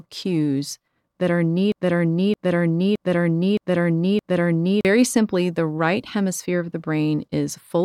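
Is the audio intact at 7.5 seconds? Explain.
Yes, at 7.5 seconds the speech plays through intact, with no dropout, click, distortion or other fault at that moment.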